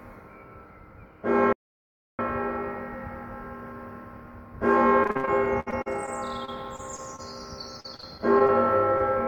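A recording of everyday sounds. From 1.53 to 2.19 s an audio dropout to silence removes about 0.66 s: the sound stops dead into silence with no room tone, likely from a lost input or stray mute, unlike concealment, which fills gaps. Repeated packet loss gives a choppy, robotic sound from 5.03 to 6.09 s (ten gaps, longest 65 ms, about 28% of the stretch patched), 6.45 to 7.20 s (four gaps, longest 25 ms), and 7.80 to 8.50 s (six gaps, longest 39 ms). The last sound is extended into each hole, so the holes are patched rather than falling silent. A short stall from a late packet at 8.98 to 9.02 s holds the sound for about 22 ms and then resumes where it left off, so, unlike the packet-loss stretches, nothing goes missing.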